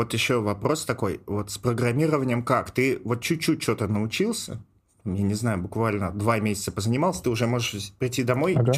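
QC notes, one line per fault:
Nothing to flag here; the speech comes through with no problems worth noting.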